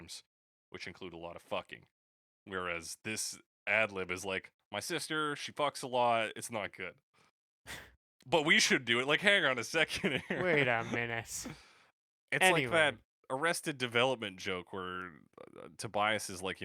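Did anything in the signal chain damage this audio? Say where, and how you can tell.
No, nothing along the chain seems to have damaged this speech recording, and there's nothing to point to at any stage.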